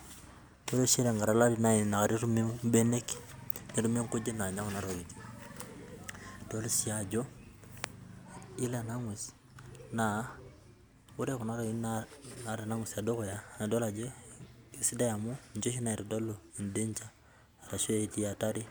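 Speech recording, and nothing technically wrong can be heard anywhere in it.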